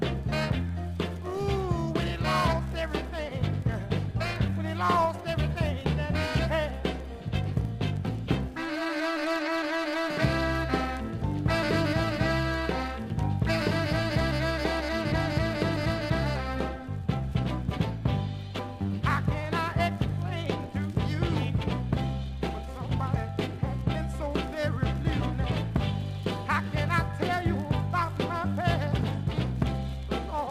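An adaptive stream at a lower bitrate is heard from 3.72 to 7.72 s. The stream abruptly switched to a leaner encoding, consistent with Opus dropping from about 64 to 32 kbit/s, so codec artefacts rise, with no gap in the audio.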